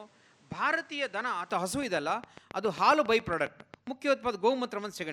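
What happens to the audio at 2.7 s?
At 2.7 s the speech sits inside a train of clicks running from 1.83 to 3.88 s: sharp, near-identical pulses at a steady 7.33 per second, around fifteen in all, peaking roughly 5 dB above the speech and ticking through pauses too. The likely source is electrical interference or a struggling interface. A spectrogram shows evenly spaced thin vertical lines across all frequencies, and the waveform shows matching narrow spikes.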